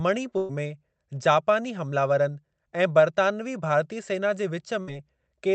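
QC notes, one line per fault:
0.37–0.52 s and 4.81–4.90 s, burst of packet loss: consecutive packets never arrived in time, so the receiver stretched and faded the last sound for 116 ms and 63 ms, then resumed, skipping 120 ms and 60 ms of speech.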